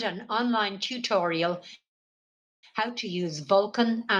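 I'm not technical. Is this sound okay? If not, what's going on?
No. From 0.28 s to the end, the level creeps steadily upward. That is automatic gain rising: the system judged the input too quiet and kept turning it up. The background noise grows along with the speech, which shows it isn't just someone moving closer to the microphone.

From 1.75 to 2.66 s there is a call audio freeze. The last sound trails off briefly, then about 0.8 s of silence follows. The likely cause is data arriving late, so playback stalled. Unlike a dropout, the speech then resumes exactly where it stopped. Nothing is lost, it just arrives later.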